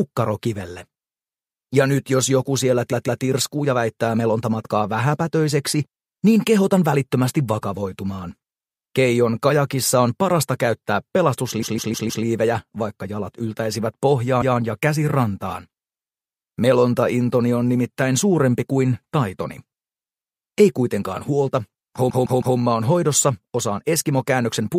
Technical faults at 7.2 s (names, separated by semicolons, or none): none